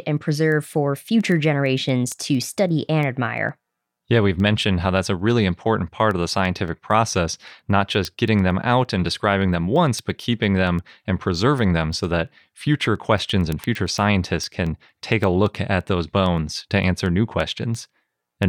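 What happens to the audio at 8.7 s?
At 8.7 s the audio is in the middle of a run of word clock ticks lasting from 0.18 s to 18.43 s. The receiver runs on its own clock, roughly 200 ppm off the sender's. About ten times a second the two clocks slip, and one sample is dropped or repeated. The result is a steady train of sharp ticks over the speech. On a spectrogram these appear as thin vertical broadband lines. In the waveform they show as single-sample glitches.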